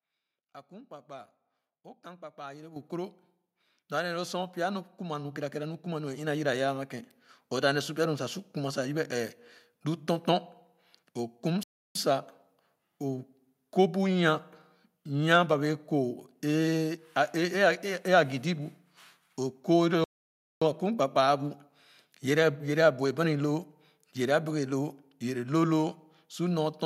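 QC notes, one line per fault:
2.76 s and 6.27 s, microphone volume stepped up: the call software judged the input too quiet and raised the microphone's gain in a single jump each time, by about 9 dB at 2.76 s and a further 4 dB at 6.27 s, just before "yiraya ama". Because the change happens at the device input, the speech and the background noise both become louder at the same instant.
11.63–11.95 s and 20.04–20.62 s, playback stall: the output drops to silence mid-flow, for 320 ms in the first case and 575 ms in the second, before the speech resumes. This is likely the player running out of buffered data or its audio thread being blocked, leaving nothing to send to the output until it recovers. The gaps are long enough to hear as clear breaks in the speech.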